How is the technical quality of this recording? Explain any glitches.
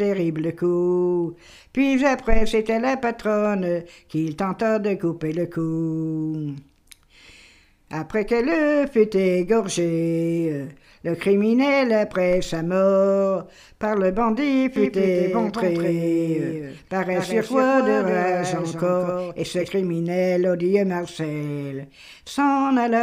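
There is one clear glitch, a doubled audio track from 14.76 to 19.68 s. For about five seconds a second copy of the full-band sound runs roughly a fifth of a second behind the original, a few decibels quieter. It has no decay and no room colour, so it reads as a crisp, out-of-step duplicate rather than an echo, and it switches on and off abruptly. The likely cause is the signal being captured again through a slower path, or an edit leaving two misaligned copies overlapping.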